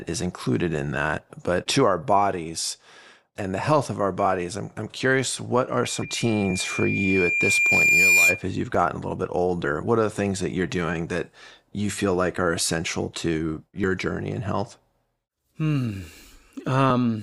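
Speech, with three kinds of technical fault. Damaged data in a compressed stream shows up four times, at 1.17, 6.02, 9.63 and 16.89 s. The third comes just after "a little bit". Each is a brief chirp or blip of about 12 to 16 ms. Corrupted bytes throw the decoder off, so it loses frame sync. It must then hunt for the next valid header. A loudspeaker feedback squeal runs from 5.83 to 8.44 s. A microphone is picking up the loudspeaker it feeds. At 2.4 kHz the loop gain exceeds one, so that tone reinforces itself. It swells slowly over a few seconds and peaks at roughly 10 dB above the speech. It ends at 8.44 s. Two dropped buffers follow. The first is at 8.75 s, between "as you've" and "a little bit". The second is at 13.84 s, between "like are essential to" and "journey in health". Each is a small skip forward with no gap of silence. The first loses only a few milliseconds. The second loses closer to 15 ms. 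The likely cause is an overrun. The hardware overwrote samples before the program collected them, so the surrounding audio was spliced directly together.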